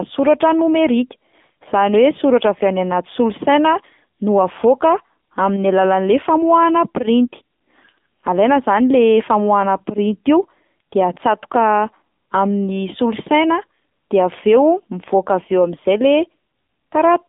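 Speech squeezed through the AMR narrowband mobile codec the whole way through, so it's confined to roughly 200 Hz to 3.6 kHz, with nothing up top. The coding damage is plainly audible, a buzzy, synthetic edge that points to a low AMR-NB mode around 7.4 kbps.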